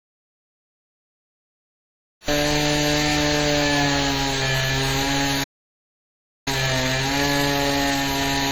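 From 0.0 s to 2.28 s there is an audio dropout to silence, already under way when the clip begins. The waveform is a dead flat line and the spectrogram is completely blank, with no room tone at all, which points to the input likely having been lost while silence kept being written.

Throughout, the sound carries heavy WMA compression damage: a ringing, washy smear with hiss that swells and fades with the signal, which fits a likely low bitrate around 24 kbps. On a spectrogram, weak detail appears as patchy, blocky gaps and smeared energy across time.

At 5.43 s the sound stops in mid-flow for about 1.03 s, a playback stall until 6.48 s. The waveform drops to a flat gap, and the spectrogram shows a clean vertical blank band where the player likely ran out of data or was blocked.

From 6.48 s to 8.42 s comes time-compressed catch-up at 1.5 times normal speed. Events are hurried but keep their normal pitch, as small pieces are cut out and cross-faded. 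The spectrogram shows features packed closer together while harmonic heights stay unchanged.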